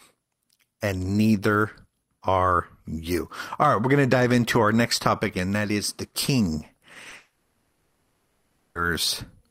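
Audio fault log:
6.93 s, 7.03 s and 7.09 s: short concealed packet loss, just after "that is the king". Each time about 20 ms of audio arrived too late. The receiver carried the last sound across the gap, so each one sounds like a brief smear or wobble.
7.15 to 8.77 s: long network dropout, again just after "that is the king". No new sound comes through for about 1.6 s. It is filled by a continued buzz or hiss that fades out, with a short stretch of near silence. Speech then resumes further on, and the part in between is gone. A likely cause is packets stalling on the network for that whole stretch.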